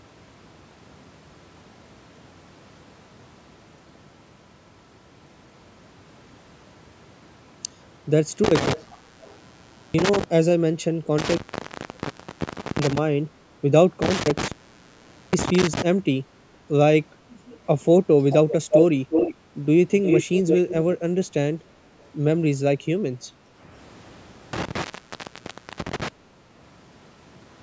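Between 8.44 and 10.24 s the sound cuts out with crackle at both edges, leaving faint hiss for 1.21 s. The same happens at 11.18 to 12.98 s (1.42 s open), 14.02 to 15.82 s (0.81 s) and 24.53 to 26.08 s (0.98 s). This is an intermittent contact: a loose cable or plug briefly breaking the signal path.

Delayed copies of the speech are heard from 8.72 to 9.36 s, 430 ms late and about 15 dB down. A fainter scrap at 17.53 to 17.58 s sits about 30 dB down. From 18.3 to 19.35 s and 20.02 to 20.95 s the copy arrives 351 ms late at about the same level as the speech, and a trace at 22.01 to 22.09 s is about 40 dB down. This is likely echo leak, where a loudspeaker's output reached the far microphone and got past its echo canceller.

From 23.34 to 23.59 s the room background dips by about 6 dB for about a fifth of a second, then returns. This is background gated by the echo canceller, which turned the microphone down while the loudspeaker was playing. 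The call's microphone processing leaves nothing above 8 kHz, which is normal for this path.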